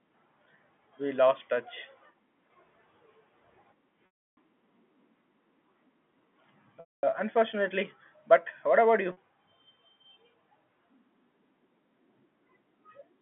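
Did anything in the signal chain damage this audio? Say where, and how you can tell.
Yes, the network dropped packets, and you can hear packet loss with pitch repetition three times. Right after "what about", at 9.12 s, a 50 ms gap is bridged by a brief held, buzzy tone. The longer holes at 4.06–4.37 s (310 ms) and 6.8–7.03 s (230 ms) start the same way. The receiver loops the last pitch period, fades it over about 50 ms into silence, then cross-fades back in, all within the narrow G.711 phone band.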